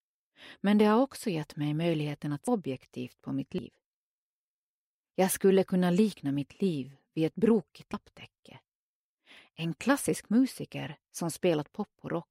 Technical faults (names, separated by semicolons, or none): dropped buffer (overrun)